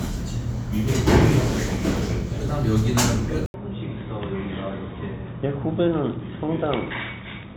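A recording of everyday sounds that at 3.46 s goes silent for 80 ms and then comes back dull and boxy until the end. Nothing above 3.8 kHz remains, the level falls by a few decibels, and a new, faint background hiss appears. The likely cause is the input switched to a poorer device mid-recording. A plain low-pass filter or codec bandwidth cut would not bring the brief gap, the new noise floor and the altered tone all at once.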